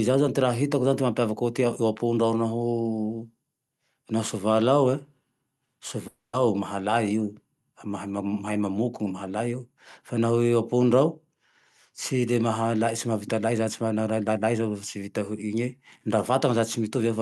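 At 6.07 s the speech cuts out until 6.35 s, a 0.28 s gap. The last sound is stretched into a fading buzz that decays into roughly 90 ms of silence. Speech then resumes with that stretch missing, likely a long network dropout.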